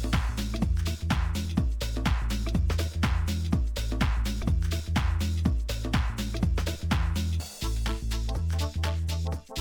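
At 4.42 s and again at 7.40 s the sound jumps forward abruptly, as if a sliver has been snipped out and the two edges butted together with no gap. Each skip is short, roughly 30 ms. The two are about 3 s apart, and that regular spacing points to audio missing between chunks: the recorder or processor was likely working in 3-second blocks and dropping a little at each handover.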